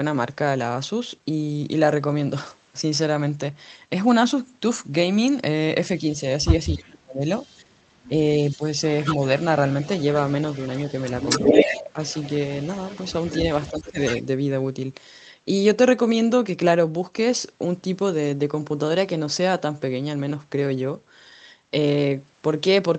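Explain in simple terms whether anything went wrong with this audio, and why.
Between 6.75 and 8.62 s, and again at 11.49 to 11.99 s and 13.71 to 13.99 s, the speech dips sharply or drops out in pieces. This is speech suppressed in double talk, likely because both sides spoke at once and the echo canceller turned everything down.

A faint, delayed repeat of the voice, trailing by about a quarter of a second, appears briefly at 7.38 to 7.56 s. It is much louder at 8.49 to 9.16 s and lingers from 9.69 to 14.23 s. This is echo leak: the far end's loudspeaker sound was likely not fully removed and got sent back.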